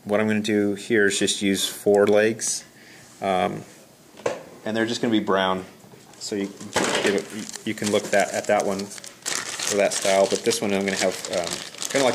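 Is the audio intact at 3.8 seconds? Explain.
Yes, at 3.8 seconds the audio plays through cleanly, with no dropout, click, distortion or other fault at that point.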